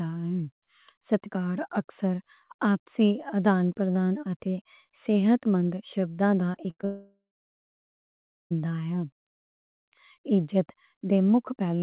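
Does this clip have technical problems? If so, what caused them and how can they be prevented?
Yes, there are two related problems in the middle of the clip, and they run straight into each other.

From 6.52 to 6.85 s there's repeated packet loss with that robotic sound. It sounds like about six short holes, the longest around 59 ms. Each one gets papered over by stretching the last bit of audio, so nearly 40% of that third of a second is filler rather than real speech. That's why it turns choppy and robotic. Prevention: prioritise voice traffic with QoS and enable forward error correction or redundancy so single losses can be rebuilt.

Right after, from 6.85 to 8.52 s, you get what sounds like a long network dropout, about 1.66 s of audio simply gone. You hear a brief smeared continuation of the last sound fading out, then roughly 1.3 s of silence before speech picks up again further along, with that whole chunk missing. 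The likely cause is the connection stalling outright rather than just dropping odd packets. Prevention: put the call on a steadier link, such as wired instead of congested Wi-Fi, and watch for bandwidth contention during calls.

The audio also stops at 4 kHz, which fits a narrowband telephone codec such as G.711.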